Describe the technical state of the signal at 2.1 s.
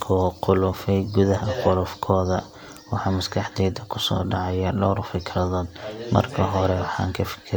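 At 2.1 s the speech signal is intact, with no audible fault at that moment.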